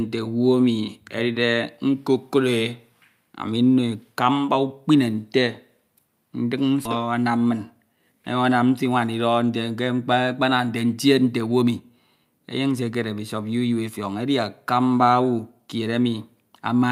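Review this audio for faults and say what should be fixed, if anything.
At 6.85 s the speech skips ahead: roughly 0.7 s of audio never plays, and the material on either side of the cut is joined with no gap of silence in between, settling by 6.96 s. Later audio was already queued, so the receiver dropped a stretch of it, either lost in transit or discarded when the jitter buffer overflowed, and playback jumped forward. The listener loses about seven tenths of a second of speech at once. To prevent it, size the jitter buffer to absorb packet bursts without overflowing, and conceal losses rather than jumping.

From 7.44 s to 7.97 s a jitter buffer speed-up follows. The speech runs at about 108% of normal speed while keeping its pitch, so it sounds slightly hurried. The buffer was holding more audio than its target, and the receiver cut that excess by repeatedly removing short pieces one or a few pitch periods long, trimming roughly 50 ms in total. 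To prevent it, smooth network delivery so packets don't arrive in clumps, and let the buffer drain its excess more gradually.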